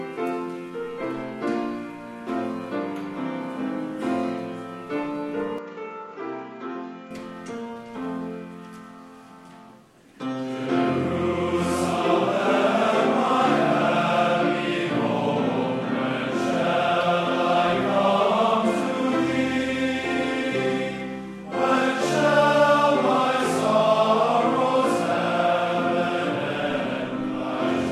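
From 5.58 to 7.11 s the sound turns dull and slightly quieter, with faint new hiss and nothing above 7.6 kHz: likely an input switched to a poorer device.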